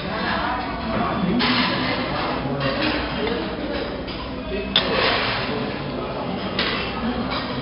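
Throughout, the audio has passed through 4-bit ADPCM compression, storing each sample as a coarse step from a prediction. The result is heavy, level-following gritty hiss on loud passages and roughened attacks, and nothing above about 5.3 kHz, which fits a rate near 44 kbps.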